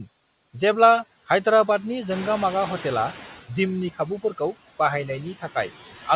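Throughout the speech, noise suppressor artifacts pull the steady background down by about 13 dB between phrases, leaving a residue that shows on a spectrogram as flickering, patchy speckles in the noise floor below the 4 kHz ceiling of the G.711 mu-law call path.

From 2.1 to 3.41 s, just after the room noise jumps by about 10 dB, the noise suppressor is catching up. The louder noise first passes with less reduction, then sinks by about 10 dB over 1.31 s as the noise estimate adapts. On the waveform the floor swells, then tapers smoothly.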